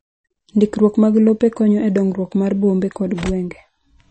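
A speech recording that has likely been through MP3 compression at a starved bitrate, which fits roughly 32 kbps, for its full length. The encoder has discarded everything above about 8.3 kHz and dropped weak spectral detail, leaving dull, watery, swirly speech with smeared consonants.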